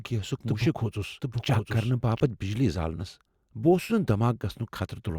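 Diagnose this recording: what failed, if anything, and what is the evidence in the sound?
A doubled audio track runs from the very start to 2.2 s: a second full-band copy of the speech, about as loud as the original, trails it by roughly 0.7 s, dry with no room decay, and stops abruptly. Likely cause: an edit or second capture path mixing two misaligned copies.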